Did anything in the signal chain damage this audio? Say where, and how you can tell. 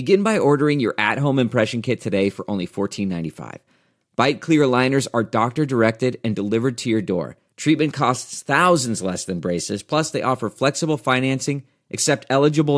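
No, nothing in the signal chain has damaged this speech recording. None of the stages between capture and playback leaves an audible mark on the sound at any point.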